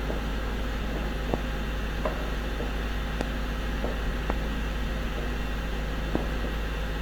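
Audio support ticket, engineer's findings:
Loud pop, four single hits at 1.34–1.36, 3.21–3.23, 4.30–4.32 and 6.15–6.18 s, roughly 20 dB above the sound (the second one nearer 15 dB). The sound carries on underneath. Likely a voltage spike from a connector, switch, static or driver glitch, shaped by the downstream stages.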